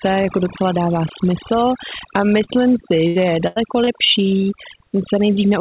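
Overdone noise removal runs through the whole speech recording. The suppressor pulls individual frequency bands down whenever they sit near its noise estimate, so the background drops and breaks up into twinkling specks, and softer parts of the voice are eaten away.

At 2.44 s, just after "docela dává smysl a", a short concealed packet loss removes about 40 ms of audio. The receiver bridges roughly 34 ms by extending the preceding sound before blending back, heard as a brief smear.

A burst of packet loss follows at 3.07 to 3.18 s, and another at 3.47 to 3.59 s. Each drops about 80 ms. The concealer holds the last sound for 78 ms and 87 ms respectively, fading it out as a held buzz or hiss, then resumes later with that stretch missing.

A second short concealed packet loss at 3.84 s again takes out about 40 ms, with some 31 ms patched over, giving a quick wobble. All of this sits in a band that stops at 4 kHz, consistent with G.711 mu-law on the call path.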